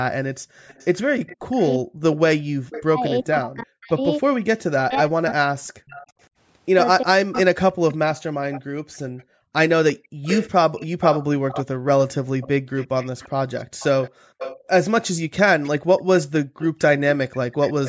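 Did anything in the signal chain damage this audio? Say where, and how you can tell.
Yes. The echo canceller in the call processing gated the background. From 0.39 to 0.56 s the room sound drops by about 40 dB for roughly 150 ms, then comes back. The same gating recurs through 8.83 to 16.58 s, cutting the background for about one and a half seconds in total. The canceller reacted to far-end loudspeaker activity by clamping the microphone path, so the ambience pumps in and out.

There is also echo leak. A delayed copy of the speech trails the original by 345 ms from 0.67 to 3.27 s, sitting about 20 dB below the direct speech. It returns from 5.86 s to the end, somewhat stronger at about 15 dB down. The fixed delay and the faint, secondary copy point to a loudspeaker on one side whose echo canceller likely failed to subtract everything its microphone picked up, sending residual echo back down the line.

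The canceller also suppressed speech during double talk. Between 1.33 and 8.5 s the talker's speech repeatedly dips, by as much as roughly 40 dB, for around 4 seconds in total. When both sides were active at once, the canceller likely could not tell the local talker from loudspeaker pickup, so it attenuated the whole microphone signal and chopped the speech along with the echo.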